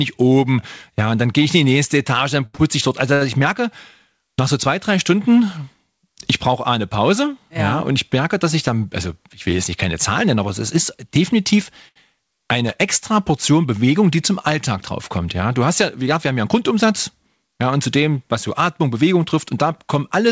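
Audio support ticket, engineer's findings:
Short stall from a late packet, four times: 2.46–2.55 s, 2.55–2.61 s, 3.14–3.23 s, 11.88–11.98 s after "aber es ist definitiv". Jitter buffer ran dry; last sound held 74, 35, 71 and 74 ms until the packet arrived. Nothing lost, just audible drag.

Loose connector crackle, 12.67–12.78 s: irregular scratchy burst of about 0.1 s. Worn or dirty contact making and breaking, chopping the signal. Check cable and plug on the capture side. Band-limited to 8 kHz, consistent with the G.722 call path.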